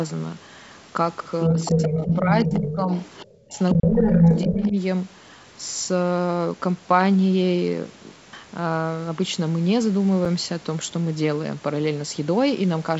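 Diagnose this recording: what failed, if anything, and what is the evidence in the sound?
The call's echo canceller likely failed to remove the loudspeaker signal from the microphone, so the other side's voice leaks through. It is heard from 1.42 to 2.76 s at about speech level, faintly from 2.98 to 3.25 s, and from 3.7 to 4.69 s slightly louder than the talker.

In the same call-processing stage, speech is suppressed in double talk. The canceller likely could not separate the near talker from the echo, so it turned everything down. The voice dips by around 15 dB from 1.47 to 2.91 s and from 3.74 to 4.76 s, and by around 20 dB briefly from 3.25 to 3.54 s.

At the driver or buffer stage, an output block went unfilled and a block of digital silence replaced the audio at 10.25 s. This 5.3 ms hole cuts in and out with no fade and sounds like a tick, which fits a 256-sample buffer.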